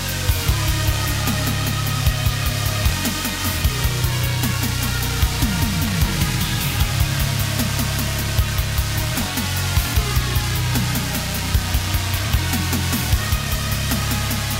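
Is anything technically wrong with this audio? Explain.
No, nothing here sounds technically wrong, and there's nothing that calls for any fixing.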